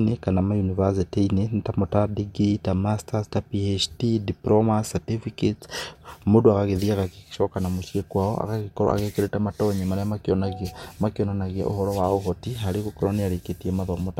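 No technical faults occur at any point in the recording, so there is nothing to describe in time order.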